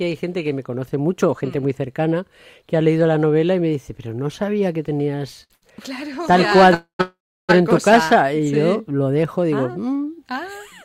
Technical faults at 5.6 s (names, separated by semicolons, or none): short stall from a late packet